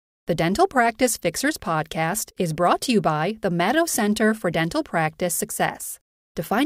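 No technical faults are audible anywhere in the speech.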